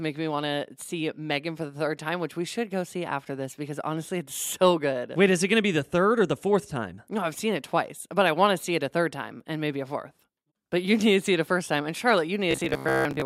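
From 12.51 s to 13.25 s, at the very end of the clip, the speech collapses into robotic sound from repeated short buffers. A rigid, metallic buzz at 66.8 Hz loosely tracks the speech contour. That buzz rate points to a segment of roughly 15 ms being looped. Most of this stretch, around two thirds or more, is repeated material rather than fresh audio, likely because new audio was arriving too slowly.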